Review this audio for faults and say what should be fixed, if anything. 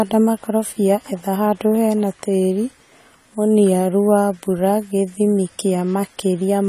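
The whole recording has plainly audible codec damage: nothing above 14 kHz, a dull, smeared top end, and a fizzy, warbly edge on sibilants and held vowels. That's most likely AAC compression, probably AAC-LC at a low rate, something like 32 kbps. At that budget the encoder drops the high band and coarsely quantises what's left, so parts of the spectrum thin out or get filled with noise. To prevent it, re-export from the original source at a higher bitrate.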